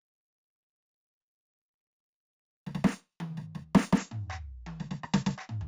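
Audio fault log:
0.00–3.98 s, imaging from linear upsampling: the music loses its top end above about 8 kHz, and a faint metallic shimmer rides on bright attacks and high parts. The band limit points to material at 16 kHz raised to 44.1 kHz by joining samples with straight lines, a weak filter that leaves a mirror copy of the spectrum in the 8–16 kHz band, roughly 30 dB down. On a spectrogram this appears as a pale reflection of the lower content folded upward above 8 kHz.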